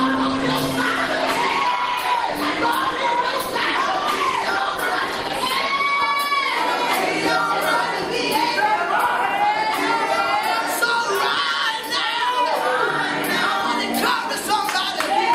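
From 0.0 to 6.0 s the audio plays as an adaptive stream starting at a low bitrate. The treble is missing or synthetic and codec artefacts are stronger, consistent with a low-rate Opus version of around 16 kbit/s chosen for a quick start. At 6.0 s the player, having measured the connection, switches to a better version, which fits roughly 64 kbit/s. The quality improves suddenly, with no gap in playback.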